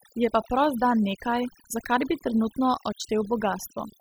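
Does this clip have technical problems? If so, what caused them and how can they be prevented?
Yes. Throughout the speech, overdone noise removal leaves the background dropped and broken into twinkling specks. Bands near the noise estimate were pulled down hard, so a spectrogram shows isolated flickering dots and ragged, gappy speech harmonics. Set reduction strength lower and capture a cleaner noise profile.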